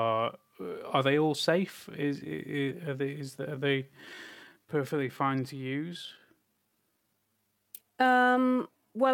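A speech recording whose pace drops abruptly at 1.83 s, right after "they all", and stays slow to the end, while the pitch doesn't budge. From there the audio drags, with syllables drawn out. This is a time-stretched section, running at about 0.74 times the original speed. The likely cause is software lengthening that stretch to fill a set duration, holding pitch by repeating short slices of the waveform.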